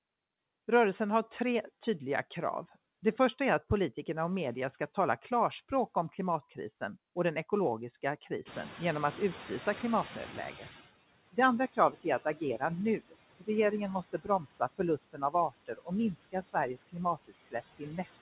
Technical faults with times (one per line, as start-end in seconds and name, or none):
0.00-18.22 noise suppressor artifacts
8.45-10.89 noise suppressor catching up
11.73-12.61 speech cut by the noise suppressor
13.00-13.72 speech cut by the noise suppressor
14.13-18.22 speech cut by the noise suppressor